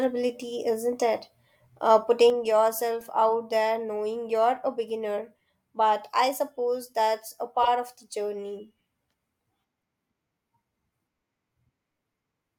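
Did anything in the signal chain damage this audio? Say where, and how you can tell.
Yes. One stereo channel drops out from 2.3 s to the end of the speech, most likely a lost connection in the analogue wiring or at one converter input. After the mono sum, everything shared by both channels falls abruptly by about 6 dB, and whatever only that channel carried is gone.

There are also corrupt frames decoded by the codec: damaged compressed frames were played as if valid, so energy lands at wrong frequencies. The first, at 3.01 s, is a faint glitch; the second, from 7.63 to 7.68 s, is a much louder glitch across a couple of frames.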